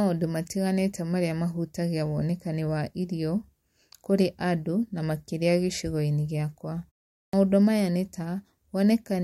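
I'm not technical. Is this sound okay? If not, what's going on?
No. There's a clipped start after a pause at 7.27 to 7.33 s: after a silence of about 0.44 s, the playback device had dozed off and needed a moment to wake, so the first 63 ms of the speech that follows is swallowed and begins abruptly.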